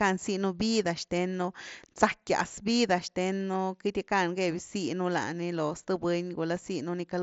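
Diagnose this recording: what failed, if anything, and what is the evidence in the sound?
Nothing has failed: the speech comes through a Bluetooth mSBC headset link, band-limited at 8 kHz with the light grain on louder passages that this wideband codec leaves, and no stage shows a defect.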